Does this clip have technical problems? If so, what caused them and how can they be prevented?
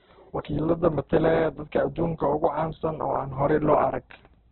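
Yes. Throughout the speech it sounds rough and grainy, and nothing gets above 4.2 kHz, so it's narrowband and dull. That's likely Opus compression starved of bits, something around 8 kbps, with bands filled by folded or noise-like content instead of real detail. Giving the encoder more bitrate, around 24 kbps or higher for speech, would prevent it.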